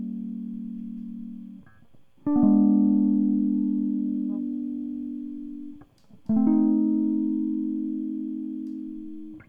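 No technical faults are audible in this music.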